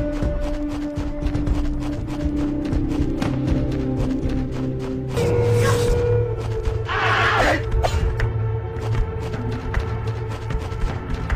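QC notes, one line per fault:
Nothing stood out on listening.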